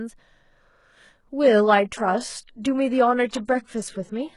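From 1.43 s to the end, the speech drops to an adaptive stream at a lower bitrate, which fits a switch from 96 kbit/s AAC to 12 kbit/s HE-AAC. The treble turns thin. The spectrogram shows a sudden ceiling at 11.1 kHz, and the waveform continues without any gap.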